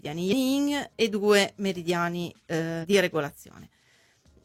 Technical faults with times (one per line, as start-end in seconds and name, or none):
0.28-0.34 damaged data in a compressed stream
2.79-2.85 damaged data in a compressed stream